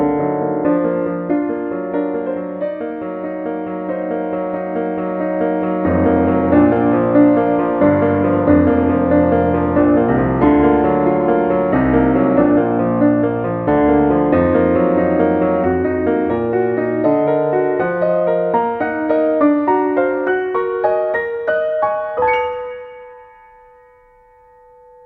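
Nothing is technically wrong with it; no faults can be heard anywhere in the audio.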